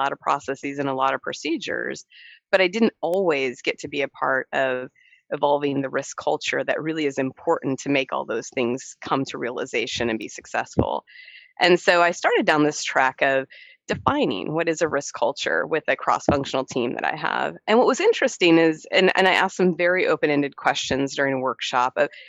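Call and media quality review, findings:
Two bit error spikes, single-sample ticks at 3.14 s and 10.22 s. First peaks around -12 dBFS, second softer at around -24 dBFS. Broadband clicks with no tie to the surrounding sound. Probable component: memory or digital link between capture and playback. Mechanism: one flipped bit throws a single sample off by a power of two, then it snaps straight back. Worth checking that path for integrity errors.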